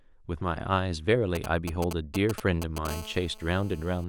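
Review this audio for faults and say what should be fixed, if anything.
GSM signalling bursts run from 1.35 s to 2.87 s. They sound like galloping ticks mixed with short 217 Hz buzzes. They are nearly as loud as the speech. A nearby 2G phone is exchanging brief signalling with its network. The audio circuit rectifies each radio burst.

GSM phone buzz follows from 2.89 s to 4.04 s. It is a steady, raspy 217 Hz buzz with many harmonics, about 17 dB below the speech. The phone has now entered a call and transmits 217 bursts per second. The circuit demodulates them continuously.

Keep mobile phones well away from the microphone, interface and cables, or switch them off, and use shielded, properly grounded wiring.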